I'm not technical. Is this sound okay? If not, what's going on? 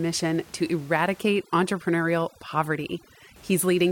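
No. From 1.21 to 3.36 s, overdone noise removal strips away background noise too aggressively, leaving twinkly near-silence behind the speech.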